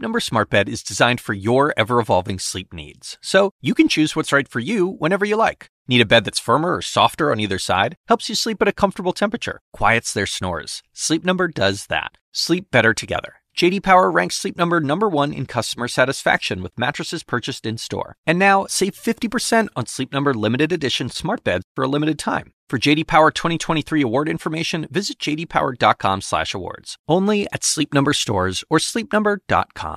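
Right after "limited edition", around 21.13 to 21.16 s, there's a brief AAC frame loss with concealment. About 20 ms of audio went missing, which fits two short low-delay frames. The decoder patched the gap from the last good spectrum, so you get a tiny smeared, phasey blip before "beds for a limited".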